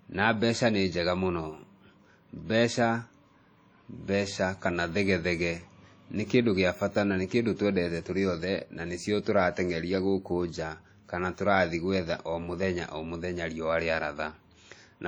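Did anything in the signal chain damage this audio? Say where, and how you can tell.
Yes, at the codec stage, throughout the speech. The sound is ringing and washy, with a hiss that swells and fades with the signal. This is likely heavy WMA compression: long transform blocks smear quantisation noise across tens of milliseconds, consistent with roughly 32 kbps.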